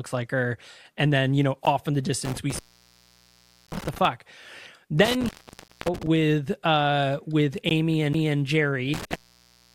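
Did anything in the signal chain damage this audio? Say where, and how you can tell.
Yes. At the network or streaming stage, short silent holes with hard edges appear at 1.65, 3.67, 5.68 and 7.69 s, lasting 14.3, 12.8, 12.5 and 15.7 ms. They fall every 2.0 s, one at each join between stream segments, so this is a gap between stream segments. The time stamps of adjacent segments leave a small space, and the player pads it with silence rather than dropping any audio.

In the analogue wiring, three longer dropouts show an intermittent contact: 2.25 to 4.05 s, 5.05 to 6.07 s (ending just before "with uh with"), and 8.94 s to the end. The line is open for about 1.12 s, 0.56 s and 0.64 s respectively. The cuts have crackle at their edges where a loose plug or cable briefly loses and regains connection, and only faint residual noise is left while it is open.

At playback from disc, a CD skip occurs at 8.13 s, just after "with uh with". 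There is a tick and a mute of about 10 ms, and then the sound resumes from a different point. A knock or disc flaw made the laser jump to another turn of the spiral, which explains the abrupt discontinuity rather than a simple gap.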